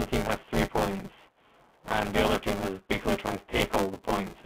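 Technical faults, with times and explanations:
Throughout: buffer tearing. A steady robotic buzz of about 188 Hz rides on the speech and drops away in the pauses, because it only exists while there is signal to tear. The writing program and the playback hardware have drifted so that they cross inside every period, which fits a 256-sample buffer. Roughly a third of each period replays audio from about 10 ms earlier, and the hard joins on both sides repeat at the buffer rate to form the buzz.
3.58–3.60 s: packet loss with last packet repeated. Just after "is basically trying to" there is a small blip. One 20 ms packet went missing, and the receiver filled the gap by playing the previous packet again. The repeated 20 ms block briefly disturbs the sound, all within the narrow telephone band of the line.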